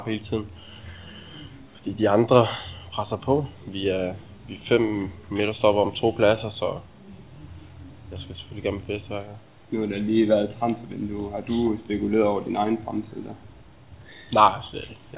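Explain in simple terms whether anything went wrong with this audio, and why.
Nothing went wrong here.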